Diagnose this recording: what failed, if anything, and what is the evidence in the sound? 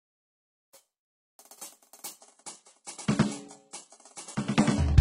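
The music drops to an adaptive stream at a lower bitrate from 2.20 s to the end. This is a network-driven codec switch. Above 11.1 kHz the treble is gone. The change is abrupt, with no gap, which points to an adaptive switch to a very low bitrate fallback.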